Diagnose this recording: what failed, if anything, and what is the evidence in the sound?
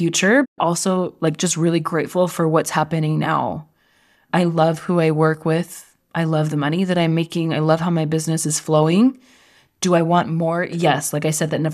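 Digital broadcast dropout in reception. Speech fades out over 20 ms at 0.44 s and returns at 0.60 s with "also like just really". Failed frames muted; 120 ms lost.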